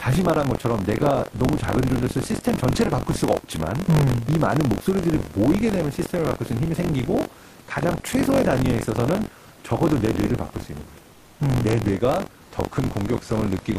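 Buffer tearing runs throughout: a robotic buzz near 46.9 Hz, fitting a 1024-sample buffer, where roughly a seventh of each period replays audio about 40 ms old.

Comfort noise in place of the background at 11.13–11.39 s: the room noise gives way for 260 ms to a flat, featureless hiss about 2 dB quieter, likely from discontinuous transmission.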